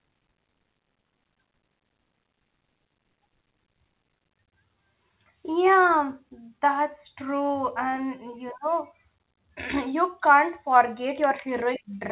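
Nothing goes wrong anywhere in the recording; the speech simply carries the narrow, telephone-like sound of a call path, with nothing above about 4 kHz, which fits an ordinary G.711 phone codec doing its normal job.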